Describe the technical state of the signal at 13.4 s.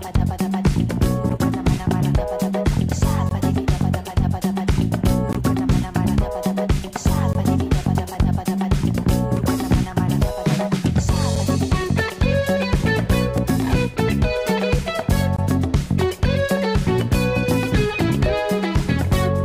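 At 13.38 s there is a gap between stream segments: a silent hole of about 3 ms with hard edges cuts into the sound. It sits at a boundary between 2-second segments, where the timestamps of the adjoining segments don't quite meet, so the player pads the shortfall with digital silence. The result is a brief, sharp dropout heard as a tiny tick or break. The surrounding audio is all still there; nothing is removed, only delayed by the inserted gap.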